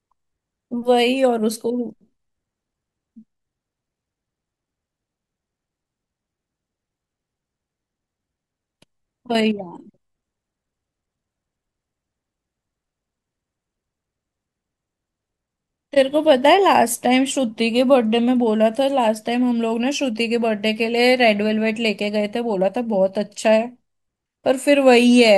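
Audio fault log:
No faults heard anywhere in this speech recording.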